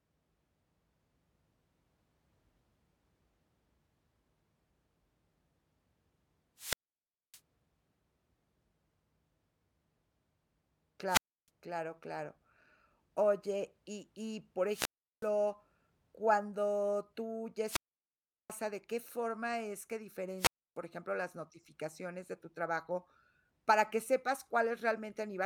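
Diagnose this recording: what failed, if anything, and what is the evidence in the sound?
The speech drops into near silence five times, each hole preceded by a short surge of hiss: 6.56 to 7.40 s (about 0.61 s muted), 11.07 to 11.49 s (0.31 s), 14.67 to 15.30 s after "y y por" (0.37 s), 17.65 to 18.53 s after "cuando tú ya" (0.74 s), and 20.37 to 20.77 s after "qué forma es que", returning on "ejemplo las notificaciones de" (0.30 s). This is wireless microphone squelch dropout at the radio link. The FM signal fades, noise rises, and the receiver's squelch mutes the output until the carrier recovers.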